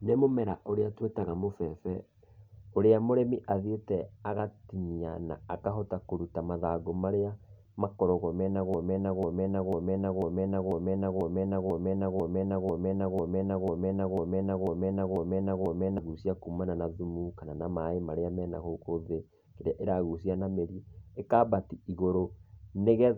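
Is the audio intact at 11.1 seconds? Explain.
No. At 11.1 seconds the speech sits inside a broken-record loop running from 8.74 to 15.98 s: one 0.49 s fragment repeats back to back 15 times, likely from a stalled player or stream resending its last buffer. Normal speech resumes at "kumana na thumu kana".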